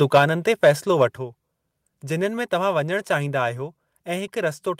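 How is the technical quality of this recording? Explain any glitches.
The recording has one glitch. At 1.17 s the speech and the background underneath it drop together by about 5 dB in a single step, with no fade, and stay at the lower level. This is a microphone volume stepped down event. The likely cause is the call software judging the input too hot and cutting the device's input volume in one move. Because the change happens before any processing, the room tone steps down along with the speech.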